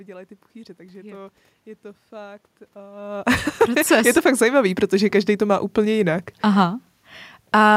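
From 2.76 s, just after "to je to fakt", until the end, the converter clock becomes unstable: sample clock jitter of a microsecond or two, with error around 35 dB below the speech. A fine hiss rides the speech, roughest on loud, bright sounds, disappearing in pauses.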